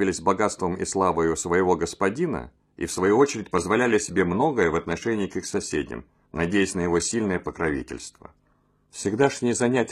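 At 2.91 s the audio switches abruptly to an adaptive stream at a lower bitrate and stays there to the end. Nothing sounds above about 14.9 kHz, and there are more codec artefacts, which suggests a jump from a mid-rate AAC stream to a very low-rate HE-AAC one. There is no gap, so this is a bitrate switch rather than a rebuffering dropout.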